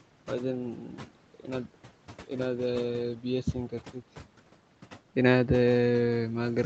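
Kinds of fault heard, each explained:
Noise suppressor artifacts: The suppressor lowers each frequency band it judges to be steady noise, frame by frame. Here it cuts the background by about 12 dB. The room noise, about 20 dB under the speech, sinks in the pauses and comes back beneath the speech.
Speech cut by the noise suppressor: Between 0.89 and 1.16 s the suppressor treats part of the speech as noise. Quiet parts are pulled down with the background, by about 12 dB at the deepest, over roughly 150 ms in total. They sound swallowed and faint.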